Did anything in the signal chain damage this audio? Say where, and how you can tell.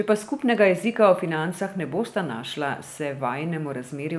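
No, nothing in the chain audibly damages this speech recording at any stage from capture to playback.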